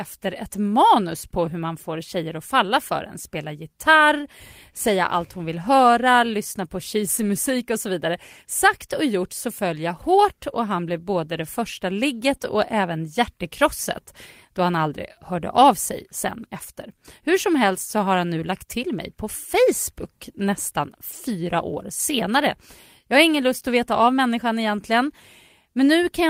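Lost packets rebuilt from error correction occur at 1.45–1.47 s, between "ett manus på" and "hur man får tjejer", then at 7.17–7.23 s and 10.49–10.55 s. Each time, a low-bitrate copy carried in the following packet stood in for the missing audio, so nothing drops out. The stretch sounds briefly rougher and noisier, for 20 ms at the first point (which fits a single lost packet) and 40 ms at the next two. The same rebuilding returns at 12.33–12.35 s.

Right after it comes a short concealed packet loss at 12.37–12.41 s. About 20 ms arrived too late, and the decoder extended the preceding sound to cover the hole before blending back in, leaving a quick smear or wobble.

Error-correction rebuilding returns at 20.05–20.07 s, just before "nästan fyra år senare", and again for 40 ms at 21.13–21.19 s, before "fyra år senare". Both moments briefly turn gritty in the same way.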